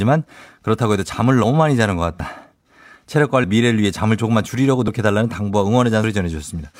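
A small jump forward in the speech at 1.44 and 2.2 s, then slightly longer skips at 3.44, 4.88 and 6.04 s, with no silence at any of them. The likely cause is a dropped buffer (overrun): samples were overwritten before being read, so the remaining audio joins directly.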